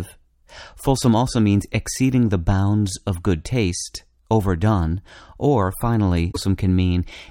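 Speech clip with damaged data in a compressed stream from 6.28 to 6.37 s, just after "good taste overdone or": a brief glitch as the decoder loses sync.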